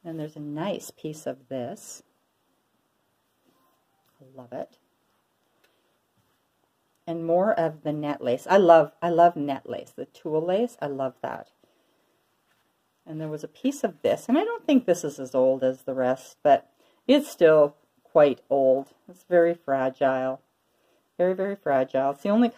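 Nothing in the audio stood out as a technical fault on listening.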